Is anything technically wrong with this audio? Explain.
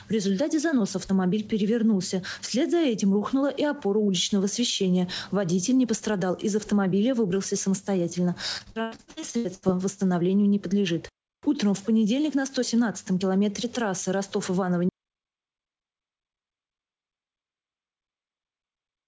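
Yes, two faults.

From 8.58 to 9.65 s there is repeated packet loss (robotic sound). Eleven holes, the longest about 100 ms, are each patched by stretching the preceding sound, so roughly half that second is synthetic fill. The result is choppy, with pieces missing. It never goes fully silent, which separates it from a dropout.

From 14.89 s to the end, the audio drops out to silence. The likely cause is a lost input, such as a disconnected device or failed link, with silence written afterward. It is dead silence with no room tone and no concealment, unlike the patched gaps earlier. Under both faults, the G.722 call path holds nothing above 8 kHz.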